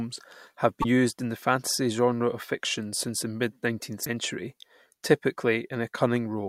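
A speech clip with two short bursts of damaged data in a compressed stream, at 0.80 to 0.85 s, just before "used in the fantasy", and at 4.01 to 4.07 s, each lasting about 55 ms. At both points corrupted bytes in the encoded stream leave the decoder misreading its frames and losing sync until it finds the next valid frame header, which produces a brief glitch such as a chirp, squawk, click or short hole in place of the speech.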